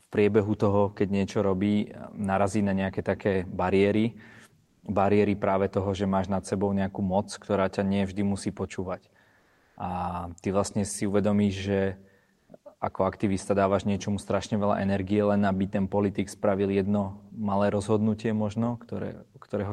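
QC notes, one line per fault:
4.67–4.83 s (after "na nejaké také bariéry"), 9.39–9.75 s, 12.35–12.47 s (before "ako aktivista dávaš niečomu"): comfort noise in place of the background. The quiet background, already about 42 dB under the loud parts, becomes a steady, featureless hiss about 2 dB lower. This is likely discontinuous transmission, with the receiver filling the pauses with synthetic noise. Unlike a gate or dropout, the gaps never go silent.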